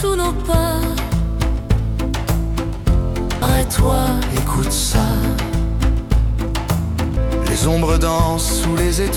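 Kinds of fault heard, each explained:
Audio missing between chunks: the sound skips abruptly at 3.42 s and again at 7.17 s. Roughly a third of a second is gone each time, and the two sides are butted together with no silence between them. The repeat points to a recorder or processor handling audio in 4-second blocks and likely losing a short stretch each time it closes one block and opens the next, so material across each seam is cut short.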